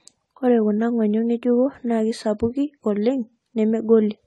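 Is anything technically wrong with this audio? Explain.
Yes. AAC compression affects the whole clip. Nothing is present above 11.5 kHz, and the speech sounds dull and smeared, with a plainly audible warbling, fizzy texture. The likely cause is AAC-LC coding at a low bitrate, consistent with 32 kbps, which lowers the cut-off and coarsely quantises the spectrum.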